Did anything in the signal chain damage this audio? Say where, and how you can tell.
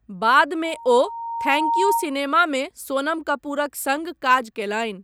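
Yes. Loudspeaker feedback squeal damages the analogue loop where the microphone hears its own loudspeaker. From 0.64 s a steady 925 Hz tone swells over about a second, reaching roughly 5 dB above the speech, until 2.14 s. Loop gain exceeded one at that frequency.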